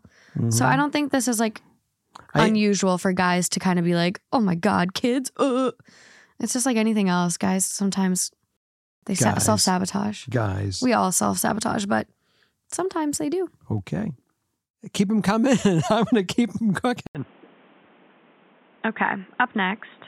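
At 17.07 s, just after "going to keep them", the speech cuts out for 80 ms. It returns dull and boxy, with nothing above 3.8 kHz. It is a little quieter, over faint new background noise, to the end. The likely cause is an input switched to a poorer device.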